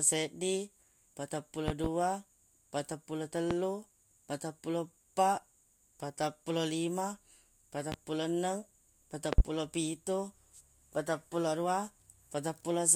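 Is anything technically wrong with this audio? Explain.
Yes. Loud pops at 1.68–1.88 s (a double), 3.51 s, 7.92 s and 9.33–9.42 s (a double), likely from voltage pulses such as plug or switch glitches, thump about 15 to 20 dB above the speech, which continues underneath.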